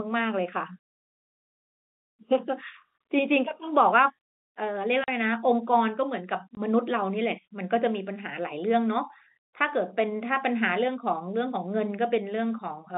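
Speech over a narrowband telephone channel shows packet loss filled with silence: hard-edged dropouts at 5.04–5.08 s (40 ms) and 6.55–6.57 s (20 ms), which fits 10 ms packets played as digital silence, while the G.711 line coding stays clean.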